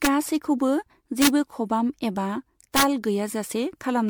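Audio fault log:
throughout: generation loss. The speech has a swirly, smeared, hollow quality, with blurred consonant onsets and spectral gaps that wander from frame to frame, even though content still reaches up to 20 kHz. The likely cause is repeated lossy re-encoding, around seven passes, with a character that fits MP3 at 96 kbit/s. Each pass requantises on a shifted frame grid, so the noise and holes accumulate beyond what one encode at that rate would produce.
0.05–0.07 s, 1.22–1.28 s, 2.76–2.83 s: integer overflow. On loud peaks the signal ran past the integer ceiling by about 2 dB, about 1 dB and about 3 dB respectively, and wrapped to the opposite extreme instead of being limited. Each crossing jumps across the full range, producing violent cracks far sharper than clipping. The second burst sits just before "खबाम एबा" and the third just after it.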